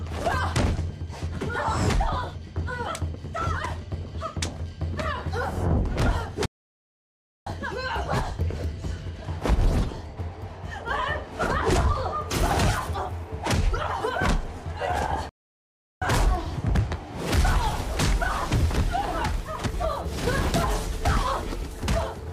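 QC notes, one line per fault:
6.46–7.47 s, playback stall: the player likely ran short of data or was blocked, so output drops to silence for about 1.0 s mid-flow before sound returns.
15.29–16.02 s, playback stall: a second starvation or blocked thread is the likely cause, cutting the sound off abruptly for about 0.72 s until playback recovers.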